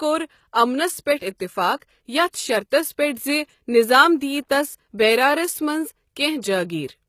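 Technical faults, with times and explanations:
throughout: HE-AAC compression, likely the cause of the plainly audible damage; the rebuilt treble is copied upward from lower bands, so s sounds turn gritty and metallic rather than dull, which fits a low bitrate near 20 kbps.
1.80 to 1.82 s: pre-echo, about 23 ms of hiss arriving just before a sharp attack, because codec noise spread across the block; unlike a click, it smears ahead of the onset.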